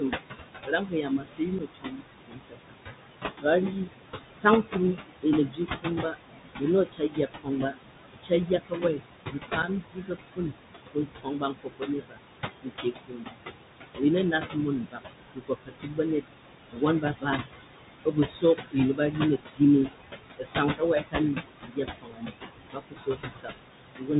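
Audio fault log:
throughout: noise suppressor artifacts. Steady background is pulled down by about 19 dB between phrases and returns under speech.
throughout: Bluetooth CVSD headset codec. One-bit delta coding at 64 kHz cuts everything above 4 kHz, so s sounds turn scratchy and a granular hiss clings to the speech itself.
0.0–13.4, 13.96–17.43, 18.05–24.11: speech cut by the noise suppressor. Soft consonants and word endings are mistaken for noise and dropped by up to about 22 dB, sounding swallowed rather than chopped.
1.59, 9.62: unconcealed Bluetooth headset packet loss. A 7.5 ms hole, the length of a single headset packet, with abrupt edges, unlike the suppressor's gradual fades.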